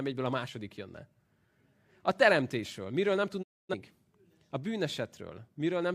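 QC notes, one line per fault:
3.42–3.75 s, digital broadcast dropout: the speech fades out over about 20 ms and stays silent until the receiver recovers, with roughly 256 ms of programme lost, a gap that fits several consecutive corrupted or missing frames being muted. What was broadcast during that span never returns. On the waveform the envelope tapers quickly to a flat line. On the spectrogram every frequency band goes blank at once and resumes together when good frames arrive.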